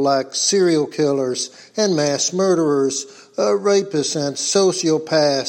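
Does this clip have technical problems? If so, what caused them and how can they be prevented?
No, nothing technical gets in the way here, so there's no fault to trace back or guard against.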